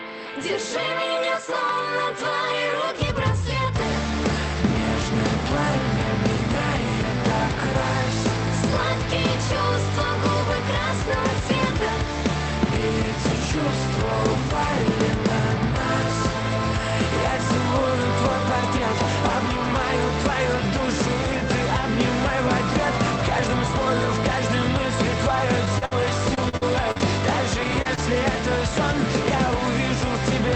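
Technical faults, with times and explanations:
25.65–27.99 s, repeated packet loss (robotic sound): gaps up to 55 ms keep recurring, each patched by stretching the last sound, giving choppy stutter rather than one isolated dropout.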